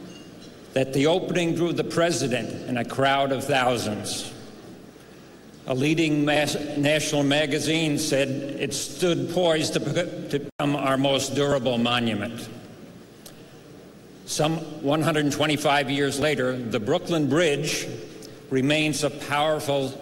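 At 16.22 s the audio jumps ahead, and roughly 20 ms of sound appears to be missing, which points to a likely dropped buffer (overrun): the capture software did not collect a block of samples before the hardware wrote over it. The two sides are spliced together with no gap. On the waveform this shows as an abrupt discontinuity with no silent stretch, and the spectrogram shows a thin vertical broadband line where the sound changes suddenly.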